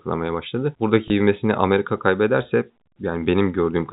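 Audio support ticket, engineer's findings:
Packet loss with last packet repeated, 1.08–1.10 s. Brief blip. Receiver jitter buffer or loss concealment replayed the prior frame across a 20 ms gap, consistent with one lost 20 ms packet. Surrounding G.711 A-law telephone path at 64 kbps, band-limited to 4 kHz, faint quantisation noise at most.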